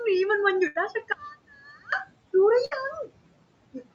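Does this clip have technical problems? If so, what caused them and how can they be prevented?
Yes. There are two bursts of packet loss, at 0.67 to 0.77 s and at 2.65 to 2.73 s. Each time, packets arrived too late or not at all. The receiver stretched the last sound for about 74 ms and then about 62 ms, fading it out. The sound then picks up further on, with roughly 80 ms and 60 ms skipped. A larger jitter buffer or a more stable network connection would prevent this.

From 1.12 to 1.92 s, the level drops by about 22 dB and what is left is faint. The likely cause is one channel inverted. With one stereo side in reversed polarity, the centred sound cancels when the channels are summed to mono. Only the small difference between the two sides survives. Checking polarity on each channel before the mono downmix would prevent this.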